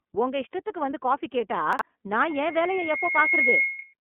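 Throughout, the speech carries iLBC codec damage. It is band-limited to a telephone line, about 200 Hz to 3.4 kHz, with nothing above 3.6 kHz. Each 30 ms frame is coded on its own, which fits a rate near 13.33 kbps. The result sounds clearly rough and synthetic.

From 1.73 to 1.81 s, just after "இஷ்டத்துக்கு வந்து காபி கேட்டா", chunks play out of order. A piece about 21 ms long arrives late, probably by three chunk lengths, and lands after the audio that should follow it. Nothing is lost. The hard joins make a brief jumbled stutter.

At 2.19 s a loudspeaker feedback squeal begins. The microphone is hearing its own speaker, and the loop gain tops one at 2.2 kHz. That single tone swells over roughly a second to about 5 dB above the speech. It howls on until 3.94 s.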